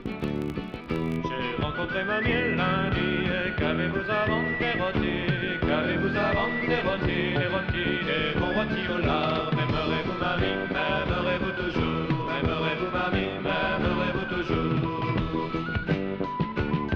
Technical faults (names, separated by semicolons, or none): filter restarted on every block